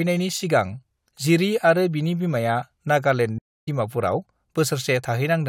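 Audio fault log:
3.38–3.68 s stream reconnect: the connection dropped, leaving 232 ms of silence, then a fresh decoder resumes the speech roughly 150 ms further on, skipping ahead.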